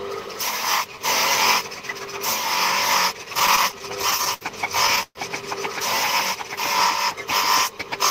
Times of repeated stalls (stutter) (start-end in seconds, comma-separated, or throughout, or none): 3.33-4.43